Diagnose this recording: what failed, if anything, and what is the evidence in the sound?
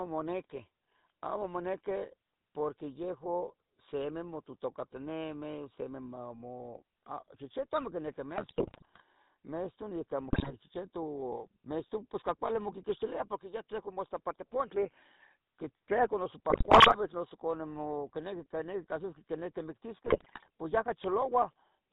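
The speech has a buzzy, gravelly roughness throughout, with nothing above 4 kHz. This points to the codec stage: GSM full-rate coding, consistent with 13 kbps. The codec rebuilds the voice from a vocal-tract filter driven by sparse, regularly spaced pulses.

Squawks, pops and gargling break in at 8.36–9.03 s (after "mamo chechetu amo quiniqui", before "mestu noyihqui amo"), 10.28–10.53 s (after "mestu noyihqui amo"), 16.5–16.96 s and 20.06–20.48 s. These are GSM bit errors on the network link. Corrupted filter, pitch and gain values distort the spectrum and level frame by frame.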